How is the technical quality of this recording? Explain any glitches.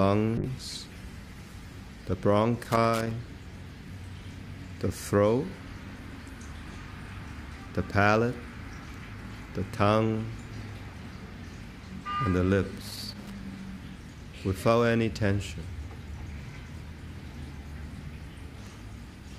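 Two kinds of fault are audible: a call bitrate drop near the start and two bursts of loose connector crackle.

From 0.39 to 2.21 s there is a call bitrate drop. The codec's bit budget was cut sharply, and the change in sound fits a fall from around 96 kbps to roughly 17 kbps, held at its lowest for about 1.76 s. With so few bits the encoder quantises coarsely and discards the upper band. The audio becomes muffled and watery, losing its top end, until the rate climbs back.

Loose connector crackle occurs from 2.63 to 3.11 s and again from 12.82 to 13.39 s. A worn or dirty contact in the signal path repeatedly broke and re-made its connection, chopping the audio. Each event is an irregular, scratchy burst of crackle lasting about half a second.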